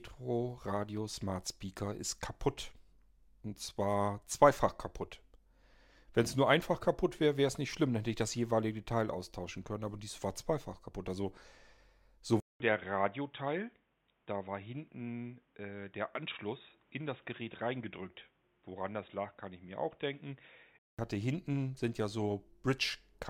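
Input switched to a poorer device from 12.4 s to 20.99 s: a 200 ms gap opens at 12.4 s, then the speech comes back with "hatte hinten sind ja", dull and boxy, with nothing above 3.8 kHz, a few decibels quieter, and carrying faint new background noise well below the voice. The likely cause is the recording input moving to a narrower-band microphone or headset call profile. Full brightness returns at 20.99 s.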